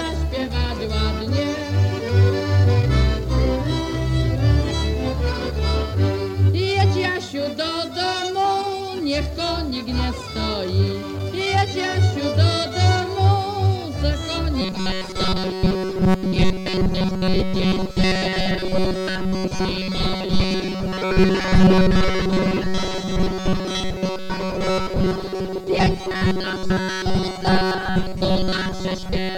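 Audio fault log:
14.6 to 29.37 s: robotic sound from repeated short buffers. The sound turns into a rigid metallic buzz fixed at 188 Hz, loosely tracking the original. The likely cause is audio arriving too seldom: a roughly 5.3 ms slice is looped over most of this stretch, skipping real audio.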